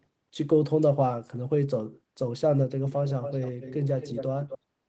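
From 2.89 to 3.75 s, 3.99 to 4.25 s and 4.49 to 4.58 s, a delayed copy of the speech trails it by 252 ms at roughly 10 dB down, fading in the last burst. This echo leak is likely a loudspeaker echo canceller letting residual pickup return.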